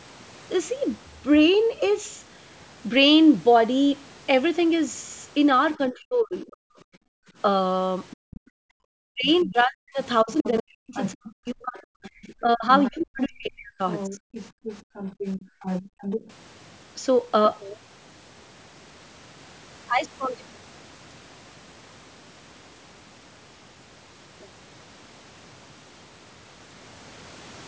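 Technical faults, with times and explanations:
5.76–6.81 s and 9.03–14.23 s, speech suppressed in double talk: the speech dips sharply, by up to roughly 40 dB, for around 1 s in the first span and around 3 s in the second. The likely cause is an echo canceller that, with both sides talking at once, could not separate the local talker from the loudspeaker signal and attenuated everything together.
7.09–8.75 s and 14.51–16.01 s, background gated by the echo canceller: the room sound drops out briefly, by about 38 dB in the first span and about 34 dB in the second, with roughly 0.7 s affected each time. While the far end was playing through the loudspeaker, the canceller clamped the microphone hard, then released it and let the ambience return.
8.11–16.25 s, other side's voice leaking through: a second voice is audible under the main speech, sitting around 10 dB below it. This is likely loudspeaker playback of the far end that the echo canceller failed to remove from the microphone, so residual echo passes into the send path alongside the local talker.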